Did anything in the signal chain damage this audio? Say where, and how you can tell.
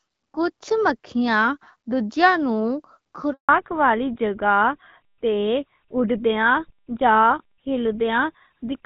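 Yes. There's a handover gap at the network stage. The sound cuts out for 160 ms, from 3.33 to 3.49 s, because no frames arrived while the call switched networks.

From 3.49 s to the end there's a fallback to narrowband in the codec. Everything above 4 kHz disappears, which points to a drop from HD Voice AMR-WB to GSM full rate.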